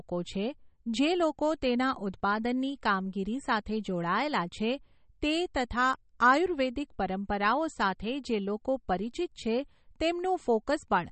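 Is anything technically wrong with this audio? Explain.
Yes. MP3 compression, throughout: likely a bit-starved encoder, around 32 kbps, cutting everything above 8.4 kHz and zeroing weak lines, so the speech sounds watery.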